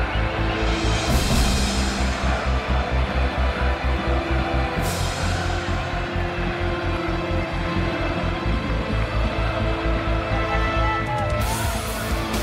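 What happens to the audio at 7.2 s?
Nothing goes wrong at 7.2 s: the audio plays through that moment intact, with no dropout, click or other technical fault.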